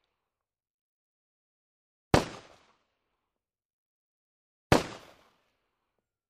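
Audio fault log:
5.00–6.30 s, sample clock jitter: a grainy hiss and roughness rides on the sound over the last stretch, thickest on loud and bright passages and dropping away wherever the level falls quiet. The converter's clock wanders by something like ten microseconds, so each sample lands slightly early or late. The resulting error scales with how steeply the waveform is moving, putting a noise-like smear roughly 15 dB beneath the signal itself.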